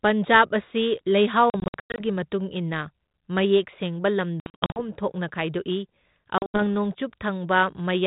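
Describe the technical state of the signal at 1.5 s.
At 1.5 s there's packet loss on an ADPCM call, running to about 2.01 s: roughly 280 ms dropped across 480 ms, as about fifteen packets' worth of hard-edged silent gaps, the longest 100 ms. Each gap knocks the G.726 decoder's adaptive predictor and step size out of sync, so the audio comes back slightly distorted until it settles.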